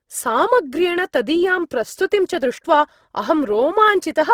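Throughout the speech, the sound is rough and grainy, with fine detail replaced by a noisy texture, though the bandwidth stays wide up to 20.3 kHz. This is likely Opus compression at a bitrate near 16 kbps, filling starved bands with noise.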